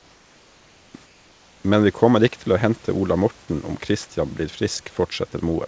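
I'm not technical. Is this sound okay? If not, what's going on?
No. From 0 to 0.94 s and again from 1.06 to 1.64 s, the quiet background becomes a flat, slightly softer hiss: likely comfort noise in place of the background, filling gaps where the call stopped sending sound.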